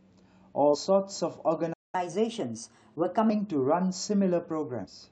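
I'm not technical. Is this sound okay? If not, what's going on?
No, the speech has three kinds of fault.

At 0.73 to 0.75 s and again at 4.84 to 4.86 s there is damaged data in the compressed stream. Each is a brief glitch as the player skips over bad bytes.

At 1.73 s the sound cuts out for about 0.2 s, then resumes at 1.95 s. This is likely a playback stall, where the player briefly ran out of data.

From 1.95 to 3.30 s there is catch-up at higher speed. The speech runs 1.15 times faster and about two semitones higher to recover the lost time, then returns to normal.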